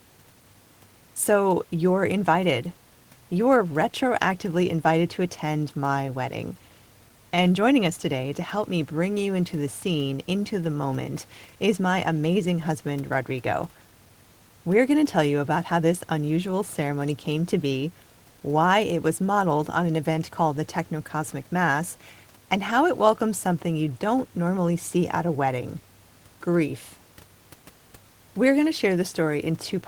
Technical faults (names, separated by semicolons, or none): none